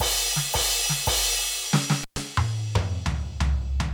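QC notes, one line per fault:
2.01–2.20 s, intermittent contact: the music cuts out for 114 ms, crackling at both edges with faint hiss between, as a loose connection momentarily opens.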